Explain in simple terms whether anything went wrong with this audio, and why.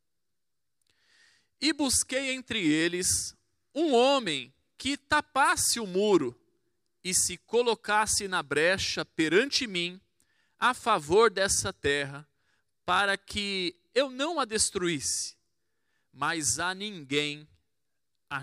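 Nothing went wrong with this audio. At no point does anything in it sound like a technical problem, so there is nothing to explain or fix.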